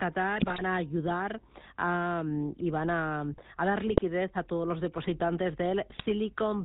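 The whole recording passes through the GSM full-rate codec, at a bitrate consistent with 13 kbps, and the damage is plainly audible. The codec rebuilds speech from a vocal-tract filter driven by a sparse, regularly spaced pulse excitation, so the voice takes on a buzzy, gravelly roughness. Because nothing above 4 kHz survives, sibilants and breath detail are dulled and the sound is narrow and boxy.

GSM bit errors break through in three short bursts. From 0.36 to 0.62 s, just before "a ayudar", the longest burst turns the voice into squawks and gargling. A second burst runs from 3.88 to 4.01 s, leading into "a todos los depositantes". The third, from 5.90 to 6.02 s, comes right after "a todos los depositantes". Corrupted filter, pitch and gain parameters reach the decoder, which bends the spectrum and throws the level about frame by frame, producing pops and distorted bursts. The density of damage suggests a weak radio link.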